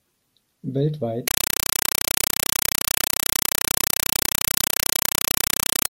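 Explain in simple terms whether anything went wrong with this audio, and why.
From 1.28 s on, the speech becomes loud chattering static: a compressed stream played as audio, with undecoded data bursting 31 times a second, which fits Dolby Digital.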